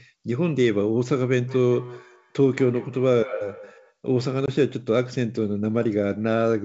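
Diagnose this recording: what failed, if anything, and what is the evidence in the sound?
Call processing: feedback echo between two devices from 1.47 to 3.97 s. The speech comes back roughly every fifth of a second, about 18 dB down, because a nearby device replays it into the mic.

Network: packet loss on an ADPCM call at 4.46–4.49 s. There's a sharp 20 ms hole, probably a single packet, and then the G.722 decoder's predictor briefly drifts out of step.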